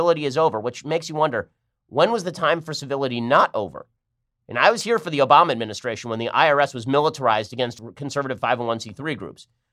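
A speech clip with two audio missing between chunks skips: one at 4.81 s, right after "I was" and before "here for the", and another at 7.79 s, just after "was militarized". Each one drops only a tiny sliver, roughly 20 ms, and the two sides butt straight together. The spacing fits recording in 3-second chunks, so the likely cause is a small piece getting lost each time one chunk closes and the next opens.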